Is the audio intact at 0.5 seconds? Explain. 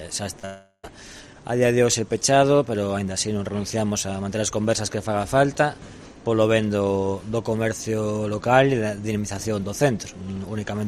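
No. At 0.5 seconds the audio sits inside a long network dropout from 0.45 to 0.85 s, most likely a stretch where no audio arrived at the receiver. About 380 ms went missing; the last sound is stretched into a fading buzz or hiss, followed by about 50 ms of silence, and the audio resumes with that portion lost.

It is preceded by short concealed packet loss from 0.39 to 0.45 s. Around 40 ms never reached the decoder in time, so the receiver extended the prior sound to cover the gap, which comes across as a brief smear or wobble.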